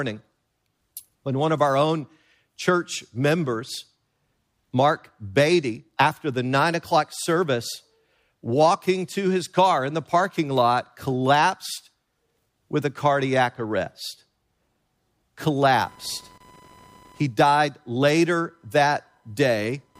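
Computer activity noise enters this speech clip at 15.64 s and continues to the end at 20.0 s, a buzzing, chirping texture pulsing at around 1 kHz and sitting roughly 35 dB below the speech. It comes from the recording computer itself: shifting load on the processor, graphics card or mouse disturbs the ground shared with the audio circuit, so the noise follows the machine's activity rather than anything in the speech.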